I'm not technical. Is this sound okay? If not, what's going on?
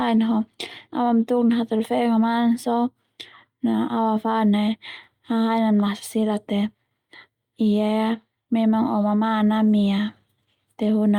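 Yes, it's fine: nothing here sounds broken, so there's nothing to worry about.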